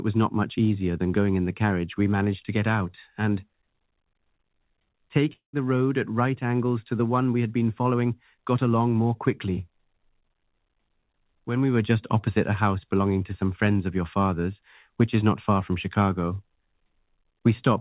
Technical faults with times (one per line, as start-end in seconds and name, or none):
5.33-5.56 long network dropout